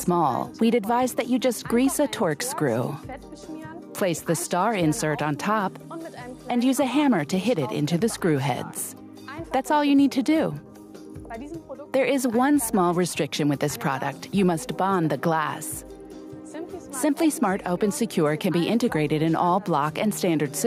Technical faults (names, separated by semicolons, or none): none